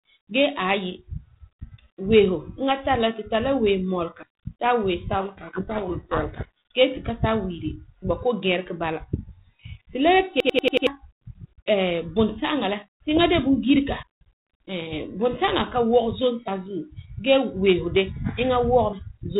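At 4.23 s the speech jumps forward abruptly, as if a sliver had been cut out and the two edges butted together with no silence between. Roughly a twentieth of a second goes missing. The same skip recurs at 14.03 s and 16.48 s, on a spacing that fits fixed blocks of about 2.5 s. This is audio missing between chunks, likely from a recorder losing a piece each time it hands over from one block to the next. It differs from a dropout because nothing goes quiet: the sound simply lurches ahead.

From 5.20 s to 6.47 s the speech sinks under a harsh, grinding distortion that bears little relation to what surrounds it. This is a codec payload misread. The link carries G.726 at 32 kbit/s, which elsewhere gives only a light, band-limited telephone character. Here the decoder takes the bits of each code word in the wrong order. The frames still decode, but the difference values are wrong, so the output is rough and noisy rather than silent or clipped.

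From 10.40 s to 10.87 s one fragment of about 93 ms repeats exactly five times, giving a rapid machine-gun stutter at about 10.8 per second. This is a system hang loop: the audio path stalled while the hardware kept replaying the same buffer, which fits a 4096-sample ring. About half a second of real audio is lost behind it. The exact, identical repeats are what set it apart from the one-off chunk skips.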